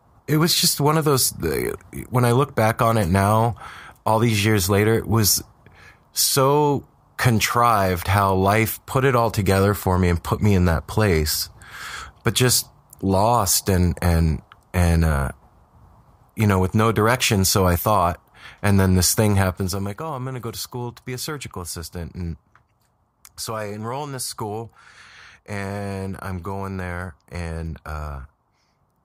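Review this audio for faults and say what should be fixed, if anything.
Zipper noise runs from 19.41 to 19.93 s as the level falls by roughly 10 dB in around a hundred unsmoothed steps a second, each step clicking. The waveform shows a staircase envelope, and the spectrogram shows a comb of faint vertical broadband ticks. Fix it by ramping gain per sample across each buffer.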